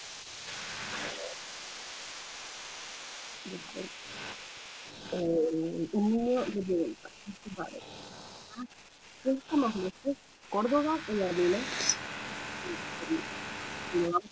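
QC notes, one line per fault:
0.0–5.0 s, echo leak: a delayed copy of the speech trails the direct sound by about 0.28 s, at about 15 dB below it. This is likely a far-end speakerphone whose echo canceller failed to remove its own loudspeaker output, sending the residue back.
6.63–7.42 s, 8.67–9.47 s, 10.13–10.49 s, echo leak: shorter scraps of the same 279 ms-delayed echo, now faint at about 35 dB down. The canceller likely still passes some residue.
5.1–8.69 s, 9.22–11.64 s, 12.61–14.31 s, speech suppressed in double talk: while both sides talk at once, the speakerphone side's speech dips and breaks up, by up to about 20 dB in the first and last spans and about 10 dB in the middle one. About 2 s and 1.5 s are affected in the first two spans. This is likely the echo canceller treating overlapping talk as echo and attenuating it, with the band still topping out at 8 kHz through the G.722 path.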